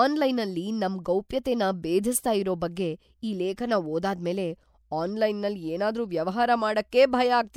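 Pre-echo hits at 1.29, 1.43 and 6.91 s, the last right after "ಏನಾದ್ರೂ ವ್ಯವಹಾರ": codec noise smears 14 to 19 ms ahead of sharp speech attacks, giving a short hiss that softens each onset.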